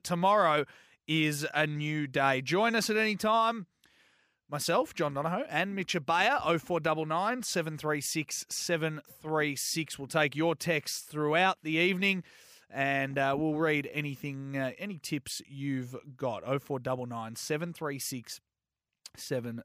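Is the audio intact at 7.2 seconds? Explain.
Yes, at 7.2 seconds the speech runs on without any audible dropout, click, glitch or other technical fault.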